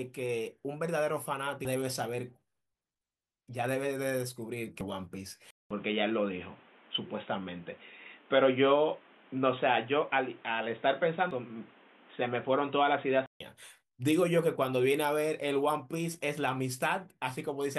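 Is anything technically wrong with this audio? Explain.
Yes. There are two problems. Damaged data in the compressed stream produces brief glitches at 1.65, 4.81, 11.31 and 13.26 s. Corrupt frames are misdecoded and the decoder resyncs at the next header. That resync is what separates them from plain clicks or dropouts.

From 5.51 to 13.40 s the speech turns dull and boxy, with nothing above 3.8 kHz and a new noise floor roughly 30 dB below the voice. A 200 ms silence marks the change. The likely cause is the input switching to a poorer device. Because the level stays about the same and the band returns abruptly at 13.40 s, this is a device change rather than a gradual filter or gain drift.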